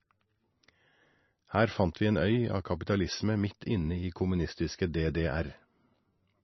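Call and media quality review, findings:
Speech band-limited and watery for the full clip. Nothing above 5.9 kHz; sibilants dull and swirly, with warbling where weak spectral lines drop in and out between frames. Attacks smeared. Likely heavy MP3 compression, with the encoder starved of bits and trimming treble to cope. Sound fits a bitrate near 27 kbps.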